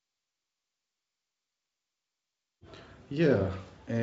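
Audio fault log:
Nothing stood out on listening to this speech recording carried over G.722 wideband telephone coding.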